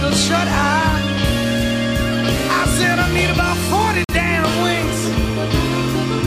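At 4.04 s the sound cuts abruptly to silence until 4.14 s, a corrupt frame muted. A damaged compressed frame was rejected by the decoder and replaced with silence. The hole lasts about 95 ms, fitting a single frame. Unlike an underrun, timing holds and nothing stutters.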